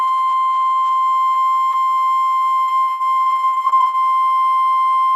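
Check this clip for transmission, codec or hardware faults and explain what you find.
One transmission fault. Repeated packet loss (robotic sound), 2.63 to 4.32 s: seventeen brief holes, the longest 82 ms, each patched by stretching the previous sound, leaving the music choppy with pieces missing.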